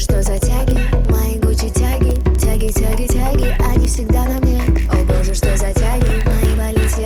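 From 0.13 s to 7.03 s, word clock ticks run through the sound. They come at a steady rate, about every 50 ms, around 150 in all. The receiving device is not locked to the sender's clock. The two clocks drift apart by a few hundred parts per million. Each time they slip past each other, one sample is dropped or repeated. The result is a sharp tick. Its strength varies from one tick to the next.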